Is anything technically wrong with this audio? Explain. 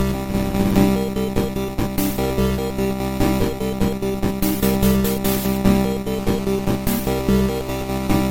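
Yes. GSM phone buzz, 6.14 to 8.25 s. Rectified bursts from a nearby phone on a call cause a steady, raspy 217 Hz buzz, about 22 dB down.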